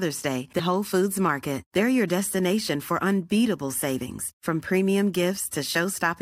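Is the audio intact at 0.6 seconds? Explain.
No. Compressed frames are skipped at 0.58 s: several whole frames never reach the output, so the speech jumps ahead by around a tenth of a second, which fits roughly four 23.2 ms frames.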